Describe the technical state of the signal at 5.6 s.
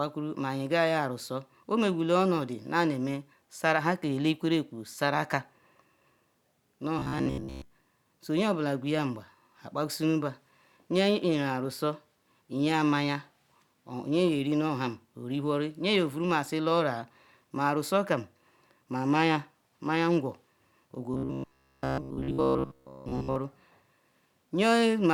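At 5.6 s the signal is intact, with no audible fault at that point in the speech.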